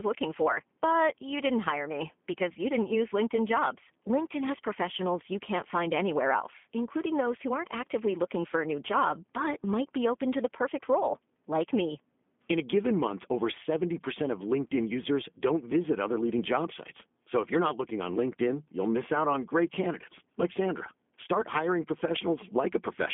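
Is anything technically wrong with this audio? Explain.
Yes. Throughout the speech, G.729 codec damage is plainly audible. The signal is rebuilt from a vocal-tract filter and sparse pulses, consistent with an 8 kbit/s G.729A stream, so it sounds rough and synthetic. A spectrogram shows energy confined to 200 Hz–3.5 kHz, with nothing above 3.7 kHz.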